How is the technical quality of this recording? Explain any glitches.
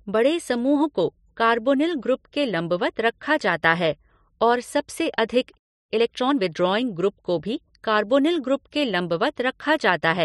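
The speech has one glitch: a playback stall from 5.58 to 5.90 s, where the sound cuts to silence for about 0.32 s mid-flow before resuming. The player likely ran short of data or had its output thread briefly blocked.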